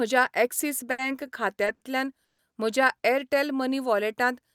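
At 0.91 s and again at 1.75 s, the speech briefly hangs on one sound, held for about 70 ms and then 60 ms with a faint buzz or dip, before carrying on where it left off. These are short stalls from a late packet. Each time, the jitter buffer emptied and the receiver stretched the last sound until the data arrived, so nothing is lost but the timing slips.

From 2.25 to 2.41 s, the audio drops into 140 ms of silence, then resumes at "म्हज्या एअरटेल" with nothing skipped. This call audio freeze likely came from packets held up in transit, draining the jitter buffer and leaving a gap.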